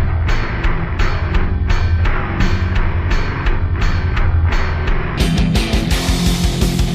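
From the start to about 5.18 s the clip suffers from stereo read as mono. The left and right samples, which alternate in the stream, have been taken in sequence as one channel, so everything runs at half speed and drops a full octave, 12 semitones down. It sounds slow and heavy. On a spectrogram, energy sits compressed toward the bottom with a weaker mirrored copy in the upper half; the waveform looks stretched out in time.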